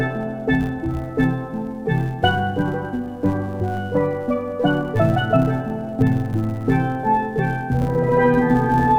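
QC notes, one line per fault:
Throughout: filter restarted on every block. The filter loses its state at each block boundary, so a small transient repeats as a 100 Hz buzz, which fits 10 ms blocks. The buzz follows the signal's level.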